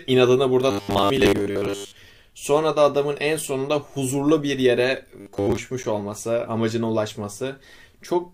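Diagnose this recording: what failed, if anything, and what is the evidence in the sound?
Robotic sound from repeated short buffers at 0.71–1.95 s and 5.20–5.57 s. A rigid 100 Hz buzz points to a driver or buffer stage, likely repeating 10 ms blocks. A spectrogram shows flat harmonic stripes every 100 Hz.

Gap between stream segments at 5.83 s, a hard-edged silence of about 9 ms where the 6 s segments meet in playback. It appears as a flat notch in the waveform and a blank vertical strip on the spectrogram.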